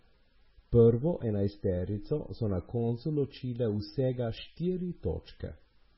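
Throughout, the speech has nothing above 5.6 kHz and a watery, swirling texture with smeared attacks, likely heavy MP3 compression at a very low bitrate, not simple low-pass filtering.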